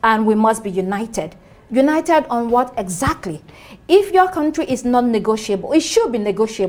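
From 0.82 to 5.08 s, sample clock jitter, an unsteady converter clock of a few microseconds, mistimes samples, adding hiss roughly 35 dB below the signal that thickens on loud, bright passages.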